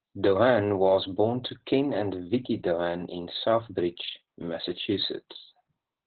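From start to end, the speech carries heavy Opus voice compression. The sound points to a very low bitrate, around 8 kbps, coded with the SILK linear-prediction coder in narrowband. The band stops near 4 kHz, so sibilants and breath lose their edge and the speech sounds muffled. The excitation is coded coarsely. That gives the voice a hoarse, buzzy grain and a slightly robotic quality. The damage stays constant through the whole clip.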